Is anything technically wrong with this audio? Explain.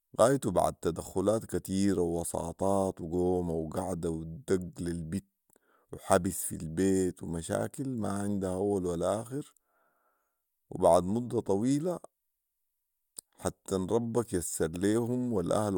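No, nothing technically wrong can be heard here.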